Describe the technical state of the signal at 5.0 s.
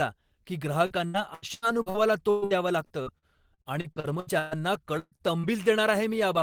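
At 5.0 s the speech hits a burst of packet loss, from 4.99 to 5.15 s. Several packets never arrived in time. The receiver stretched the last sound for about 124 ms, fading it out, then 30 ms of silence. About 120 ms of speech is gone.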